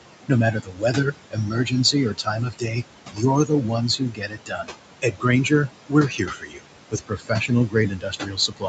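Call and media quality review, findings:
Noise suppressor artifacts, whole clip: background pulled down by about 21 dB, pumping between phrases. Suppressor gating room noise (only about 10 dB under speech) band by band. Tops out near 8 kHz, which fits the call path.

Speech cut by the noise suppressor, 0.28–2.78 s, 3.13–4.7 s and 5.02 s to the end: soft bits swallowed, up to about 19, 18 and 22 dB down, roughly a second affected in each of the first two. Suppressor treating low-level speech as noise.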